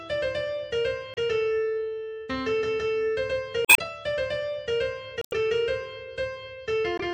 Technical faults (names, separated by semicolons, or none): MP3 compression; damaged data in a compressed stream